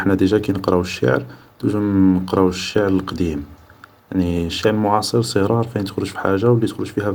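This speech clip has no technical faults; it carries Opus voice compression in its fullband hybrid mode, with content reaching up to about 20 kHz and only light coding colour, which fits a rate around 24 kbps.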